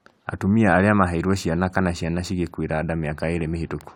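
Nothing goes wrong in this bit of speech; there's no technical fault to point to anywhere in it.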